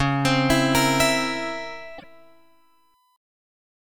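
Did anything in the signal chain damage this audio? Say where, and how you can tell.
Yes, two spots. From 1.22 to 3.16 s there's a steady 1 kHz whine, about 40 dB under the signal, sitting in the analogue wiring. That's USB whine: the bus's 1 ms frame timing is leaking into the audio through the power or ground.

Around 1.97 to 2.04 s the audio jumps ahead, with a disturbance lasting roughly three 26 ms frames. That's likely a broken MP3 bit reservoir at the codec or storage stage: frames went missing, and the next ones reached back for borrowed bytes that weren't theirs.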